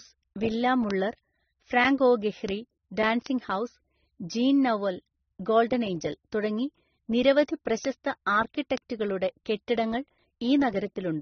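The speech has most likely passed through a chain of lossy codecs, an AAC encode at a low rate followed by a second encode to MP3, with the artefacts fitting roughly 24 and 35 kbit/s. This transcoding between lossy codecs leaves nothing above 6.4 kHz, so the speech sounds dull and band-limited throughout. The second encoder spent its scarce bits re-coding the first one's smearing, so a swirly, watery texture and a grainy hash sit on top of each other.

Five times the stored or transmitted data takes a bit error spike: at 0.91 s, 2.49 s, 3.26 s, 7.85 s and 8.78 s. In each, a flipped bit throws the sample value up or down by a power of two before it snaps straight back. At 0.91 s the jump covers a short run of adjacent samples rather than one. Each is heard as a single sharp, broadband tick with no relation to the speech around it.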